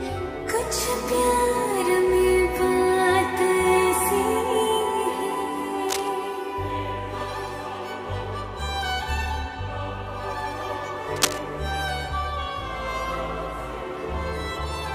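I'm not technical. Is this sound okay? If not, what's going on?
No. Most likely a worn cable or plug was being moved, so its electrical contact kept flickering. That causes cable scratch noise: brief scratchy, rustling bursts from 5.89 to 6.08 seconds and again from 11.16 to 11.53 seconds, the second as loud as the sound itself.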